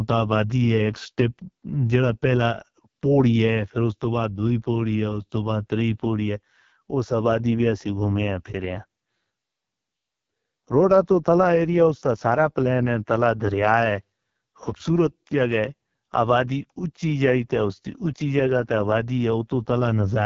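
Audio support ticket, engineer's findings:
AMR wideband (HD Voice) codec, whole clip: bit-starved pulse model, consistent with lowest 6.6 kbit/s mode. Speech rough, raspy, heavily damaged; nothing above 7.2 kHz.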